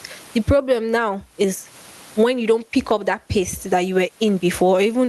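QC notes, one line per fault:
Throughout, gain pumping: the gain swings by roughly 20 dB, squashing loud and soft parts closer in level, likely from excessive mic gain driving a fast limiter.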